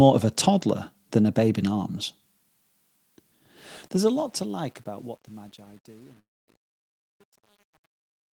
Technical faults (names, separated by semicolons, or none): truncation distortion on a fade; long network dropout